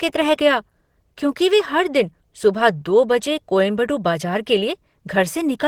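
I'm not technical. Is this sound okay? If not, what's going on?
No. From start to finish the speech sounds hoarse and grainy, likely from Opus compression. The roughness is steady and grainy, not the swirling, watery effect other compression leaves.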